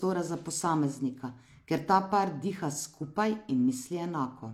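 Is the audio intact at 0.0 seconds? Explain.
No. At 0.0 s, as throughout, this is low-bitrate audio saved at a high bitrate. The speech keeps artefacts of a likely earlier low-rate encode, and the spectrogram is empty above 18.5 kHz.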